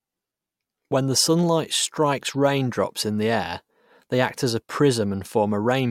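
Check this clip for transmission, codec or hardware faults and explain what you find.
One codec fault is audible. At 0.91 s, just before "the sunlight strikes raindrops", compressed frames are skipped. About one frame is lost, which fits a 32 ms frame length. The speech jumps ahead by roughly 30 ms.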